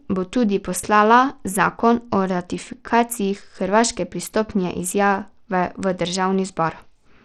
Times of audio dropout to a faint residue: none

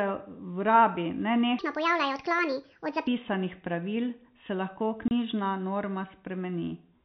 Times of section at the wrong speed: 1.59-3.07

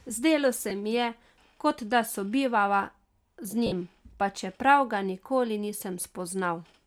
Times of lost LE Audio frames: 0.70, 3.66-3.72, 5.27

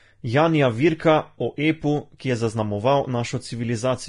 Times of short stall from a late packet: none

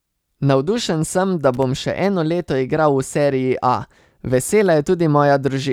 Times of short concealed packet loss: none

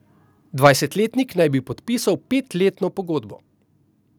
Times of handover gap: none

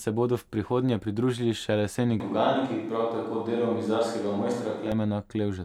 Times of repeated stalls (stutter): none

